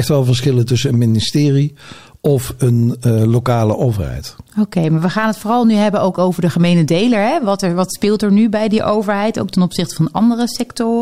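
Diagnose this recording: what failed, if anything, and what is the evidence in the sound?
Nothing in the chain seems to have failed, since no stage leaves any audible trace of trouble anywhere in this recording.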